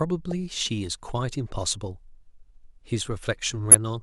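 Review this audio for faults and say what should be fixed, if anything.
There's damaged data in a compressed stream at two points: a very short blip at 0.31 s and a much longer glitch from 3.71 to 3.75 s. In both places part of the encoded speech arrives corrupted, so the decoder can't make sense of those frames, loses its footing in the stream and has to hunt for the next valid frame header before playback resumes cleanly. That misread stretch comes out as the glitch. To prevent it, carry the file or stream over a path with integrity checks (checksums or CRC-protected frames) and re-fetch or re-encode from the original source rather than patching the damaged copy.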